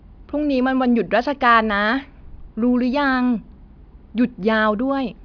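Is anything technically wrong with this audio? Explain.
No, nothing technically wrong can be heard here.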